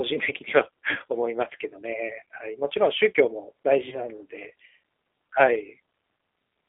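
From start to finish the speech runs through what sounds like G.729 coding, the G.729A flavour, which points to an 8 kbit/s VoIP link. The band sits roughly between 250 Hz and 3.6 kHz, so there's no air up top and little weight below. The codec rebuilds each 10 ms frame from a vocal tract filter, a pitch predictor and a handful of pulses, and that coarse model gives the voice a plainly audible rough, slightly synthetic edge.

Then at about 3.89 s there's a dropout that the speech codec concealed. Roughly 30 ms of audio went missing, which fits a single lost packet. The decoder carried on from its last pitch and filter settings and turned the gain down frame by frame, so you hear the sound stretch into a short buzzy tone or coloured noise that fades. Because each frame builds on the previous one, the voice stays weak and smeared until about 4.01 s before it recovers.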